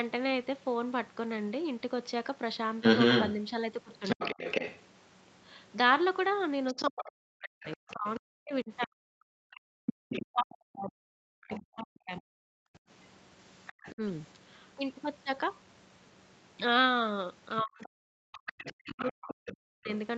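From 2.81 to 4.81 s a second voice comes through alongside the speech, quite loud, a little above the main talker. This is the other side's voice leaking through. The talker's loudspeaker is likely feeding the microphone, and the echo canceller is not removing it all. Inside that stretch, at 4.16 to 4.22 s, the speech briefly cuts out by roughly 35 dB. This is speech suppressed in double talk, likely because the canceller could not separate the two voices and turned both down.

From 6.67 to 11.61 s the other voice leaks through again, somewhat below the talker. Over 6.73 to 14.02 s the talker keeps dipping and breaking into pieces, by up to roughly 40 dB, for around four seconds in total. Again, this is likely double-talk suppression. At 12.69 to 12.84 s the room sound drops out for a moment, by about 40 dB, then returns. This is the background gated by the echo canceller, which clamped the microphone while the loudspeaker played. 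A faint scrap of leaked voice follows at 13.67 to 13.91 s, well below the speech. From 17.57 to 19.91 s the other voice leaks through once more, fairly quiet. Over 17.62 to 19.89 s the talker is cut down by up to roughly 40 dB, for about two seconds in total. This is likely the same double-talk suppression.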